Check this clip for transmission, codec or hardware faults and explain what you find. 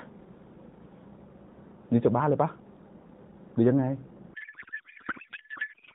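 One fault is present: a codec payload misread from 4.34 s to the end, in AMR narrowband speech whose light band-limited coding fits its 12.2 kbps mode. The speech collapses into garbled noise and warble that barely tracks it. This points to octet-aligned AMR frames being parsed as bandwidth-efficient, so the decoder reads every field from the wrong bit positions.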